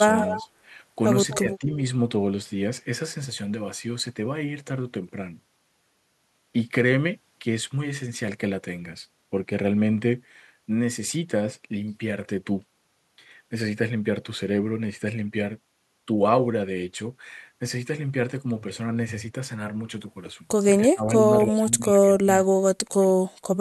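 Right at the start, 0.18 to 0.44 s, there's an echo leak: a faint copy of the speech trailing about 255 ms behind, roughly 10 dB down, likely from a loudspeaker the echo canceller didn't fully catch. It pops up again more quietly, about 15 dB down, from 1.3 to 1.4 s. Straight after, from 1.43 to 1.74 s, the speech dips by around 10 dB. That's speech suppressed in double talk, likely the canceller ducking everything while both sides overlap. The same thing comes back harder at 20.91 to 21.09 s, dropping around 25 dB, and then from 21.46 to 23.1 s, where about a second of it gets pushed down as much as 30 dB.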